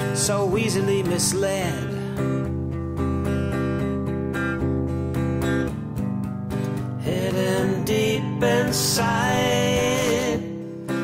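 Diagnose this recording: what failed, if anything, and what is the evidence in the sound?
The failure is in the analogue wiring: a loose connector crackle. From 9.95 to 10.23 s an irregular burst of scratchy crackle cuts through the sound. A worn or dirty contact is making and breaking rapidly, chopping the signal. Any DC on the line turns each break into a pop.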